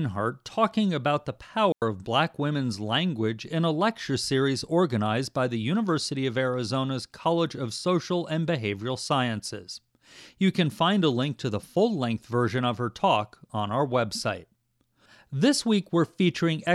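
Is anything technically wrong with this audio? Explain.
Yes. At 1.72 to 1.82 s, after "talking about the", a digital wireless dropout occurs. The receiver loses data and mutes for about 100 ms, leaving a clean, noiseless hole.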